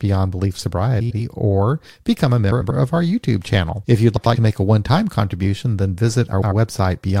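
Frames arrived out of order four times, at 1.00 to 1.20 s, 2.52 to 2.71 s, 4.17 to 4.36 s and 6.33 to 6.52 s. Each time, two adjacent 93 ms blocks (fitting four-frame runs) decoded swapped, so the speech flutters garbled, with no lost time.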